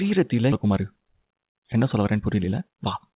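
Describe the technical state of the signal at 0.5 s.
A skip ahead occurs at 0.52–0.54 s: roughly 0.7 s of sound is dropped, as when a jitter buffer overflows with later audio already queued, and playback jumps forward with no gap or fill, joining both sides almost directly within the 4 kHz band-limited call audio.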